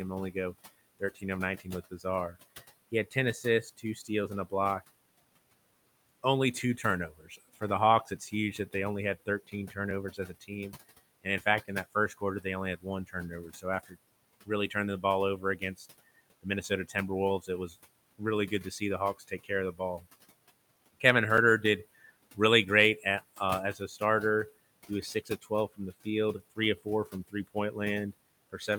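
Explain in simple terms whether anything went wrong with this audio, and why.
A few things went wrong, all from processing rather than the room, whose steady background noise sits well under the talking.

There are noise suppressor artifacts the whole way through. The noise suppressor pulls the background down hard, frame by frame, so the noise dips between phrases and creeps back under the speech.

There's also speech cut by the noise suppressor. It mistakes bits of the talking for noise and turns them down along with the background, so soft sounds and word endings come out swallowed. It happens from 0.99 to 2.36 s and from 2.91 to 4.87 s, each time only about a third of a second in total. The longest stretch runs from 6.23 to 20.06 s, with around three seconds in total affected. It shows up again lightly from 23.00 to 24.01 s, and again from 24.89 s to the end.

Finally, there are two blocks of digital silence, at 9.91 s and 21.37 s. 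The audio briefly drops to silence and snaps back with no fade, most likely because the software didn't fill its output buffer in time. Both gaps are only a few milliseconds long, so you hear them as small ticks rather than holes.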